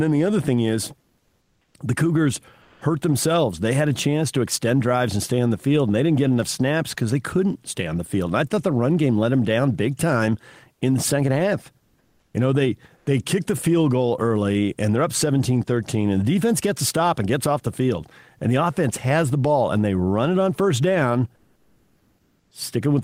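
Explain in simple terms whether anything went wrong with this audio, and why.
Something did go wrong, in the quiet gaps. Six times the real room sound drops out and is replaced by comfort noise in place of the background, a flat, featureless hiss. Three patches are quieter, one is louder, and two stay at about the same level. It happens at 0.99–1.74 s, right after "the other thing is", then at 2.61–2.81, 10.73–10.81, 11.78–12.34, 12.96–13.06 and 21.35–22.51 s. The likely cause is the sender going silent during pauses (Opus DTX) while the receiver fills in fake noise.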